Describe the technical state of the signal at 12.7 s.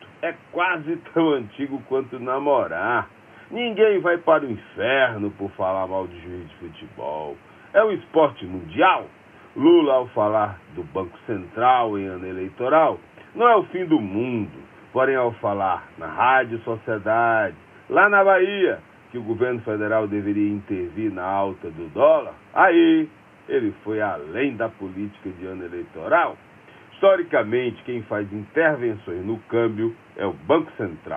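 At 12.7 s the signal is intact, with no audible fault at that moment.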